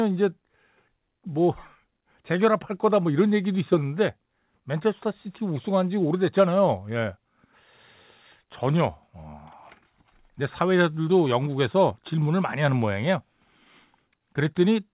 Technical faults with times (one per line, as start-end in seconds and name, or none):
none